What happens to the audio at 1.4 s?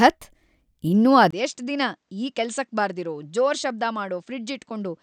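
Just before that point, at 1.31 s, the speech drops out for a brief gap of about 20 ms, then returns noticeably quieter and duller, with nothing above 8.6 kHz and faint new background noise underneath, through to the end at 5.03 s. This is likely an input switched to a poorer device, a narrower-band microphone with its own level and noise.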